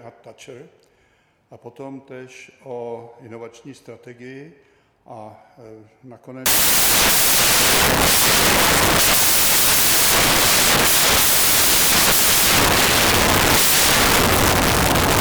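From 6.46 s to the end, the decoder starts assembling each sample from the wrong bytes. It has slipped by one byte, reversed the byte order or taken the wrong alignment, so the rapidly fluctuating low-order bits land in the most significant positions. The sound collapses into loud, harsh broadband noise that continues to the close of the clip.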